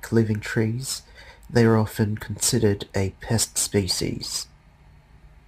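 From start to finish the speech carries crude rate conversion. The audio was moved from 48 kHz to 44.1 kHz by taking the nearest sample each time, so samples are dropped in a fixed, repeating pattern with no filtering. That leaves an error roughly 20 dB below the speech, heard as a gritty, inharmonic fizz that rides on louder and brighter syllables. Unlike codec artefacts, which swirl and smear, it clings to the sound as a steady, unrelated buzz.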